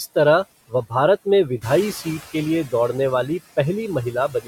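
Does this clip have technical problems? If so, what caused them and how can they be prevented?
Yes. Throughout the speech there are noise suppressor artifacts. The suppressor pulls steady background down by about 17 dB frame by frame, so the noise dips between words and swells under them. A gentler reduction setting or a quieter capture environment would prevent this.

From 1.61 to 2.22 s, after "भारत में" and before "के लिए", the noise suppressor is catching up. The room noise jumps by about 11 dB near 1.5 s, and the noise estimate lags, so noise leaks through with only about 10 dB of reduction before sinking over 610 ms. A suppressor with a faster-adapting noise tracker would avoid this.

From 4.12 s to the end there is speech cut by the noise suppressor. Parts of the speech are mistaken for noise and turned down by as much as about 16 dB over roughly 150 ms, so they sound swallowed and faint. 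Lowering the suppression depth or improving speech detection would prevent it.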